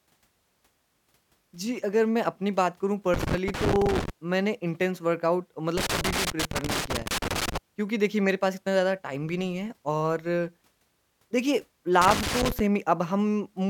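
At 3.14 to 4.10 s, 5.78 to 7.57 s and 12.01 to 12.60 s the speech breaks into irregular scratchy crackle, a loose connector crackle: a worn or dirty contact intermittently opening and closing, chopping the signal.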